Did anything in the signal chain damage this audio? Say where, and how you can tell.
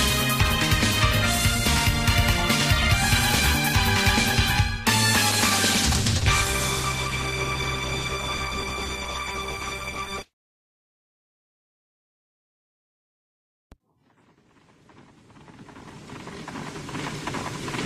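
Yes, there's a call bitrate drop, which is a network and codec problem. From 5.3 s to about 10.39 s the sound loses quality, turning rough, watery or muffled, and then clears before the clip ends. That points to the call's bandwidth estimate falling and the Opus encoder being told to spend far fewer bits, roughly from 32 kbps down to around 13 kbps, so it codes everything more coarsely until the rate climbs back.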